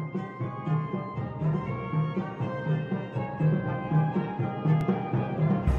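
At 4.81 s the audio drops out in a block of digital silence about 2.1 ms long. The sound cuts out and returns with no fade, so the two hard edges sit close enough together to be heard as a single sharp tick rather than a gap. A dropout this short points to the output buffer not being filled in time, with the missing stretch played as zeros.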